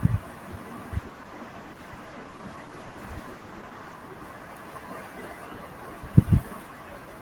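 At 0.97 s the speech turns rougher and duller. This is a call bitrate drop. The connection's bandwidth estimate fell, so the encoder had far fewer bits to spend. The sound points to a fall from around 32 kbps to 14 kbps. Coding becomes coarser, and the top end narrows from 20 kHz to 12 kHz. The lowest rate holds for about 3 s. Clarity returns at 4.01 s.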